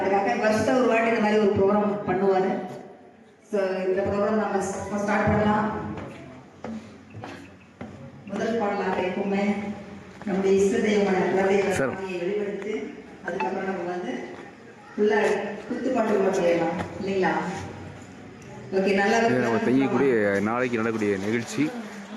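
The audio shows gain pumping throughout: the gain swings by about 10 dB, without a gate's silence, likely from excess gain into a fast limiter.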